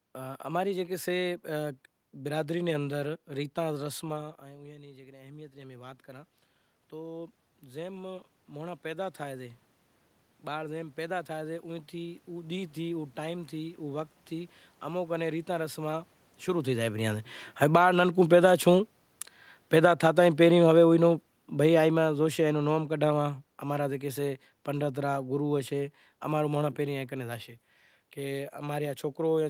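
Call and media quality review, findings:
Automatic gain rising, 4.13 to 15.84 s: level drops about 17 dB as the talker moves back around 4 s, then AGC slowly claws back about 15 dB over ten-plus seconds. Voice and room noise swell together, a giveaway it's gain, not the talker. Again 17.86 to 20.47 s: small pump up, about 4 dB, riding on top of the fall below, so level wobbles there.

Automatic gain falling, 17.48 to 26.69 s: talker moves again around 16.5 s, AGC backs off about 12 dB across roughly nine seconds. Sinks gradually with the room bed sinking alongside. Input too loud, or room noise too strong for the starting gain, is the likely culprit; worth checking AGC attack and release settings together with the rise case.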